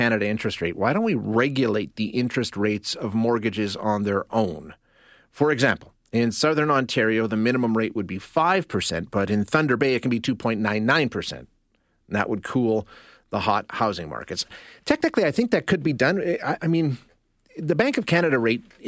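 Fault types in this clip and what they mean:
No fault types can be heard in this clip.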